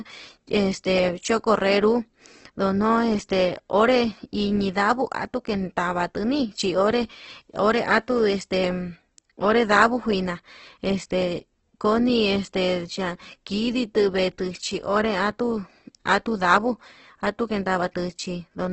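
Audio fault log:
throughout, Opus compression: speech turns grainy and rough with nothing above 8.2 kHz, likely Opus music mode filling starved bands with noise, which fits about 12 kbps.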